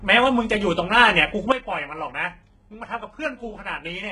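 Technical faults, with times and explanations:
Throughout, HE-AAC compression: the treble is likely rebuilt by spectral band replication, copied up from lower bands under a coarse envelope, so s sounds turn gritty and lispy. Heavy codec damage; a spectrogram shows repeated, blocky upper bands ending near 11 kHz.
1.52 s to the end, sudden gain jump: the level drops by about 12 dB from one sample to the next, likely a gain change applied without a ramp. Speech and background noise fall together, and the waveform's envelope narrows abruptly at that instant.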